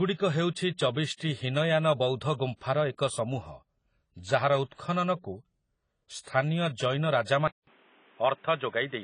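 Throughout the speech there is plainly audible codec damage. Nothing comes through above 10 kHz, so the top is dull, and the spectrum is smeared, with a warbling, fizzy texture on sibilants and sustained sounds. The likely cause is AAC compression at a low bitrate, which fits AAC-LC at around 24 kbps. Starved of bits, the encoder lowers its cut-off and quantises the remaining frequency lines coarsely against its hearing model, leaving gaps or substitute noise in the bands it cannot afford.

At 7.48 s the sound drops out for about 0.2 s and returns noticeably narrower and boxier, with nothing above 3.8 kHz, and it stays that way to the end. A new background noise appears, well below the speech, while the overall level stays about the same. This is likely the input switched to a poorer device partway through the recording, such as another microphone or a headset's call profile. That device's restricted bandwidth and its own noise replace the earlier path.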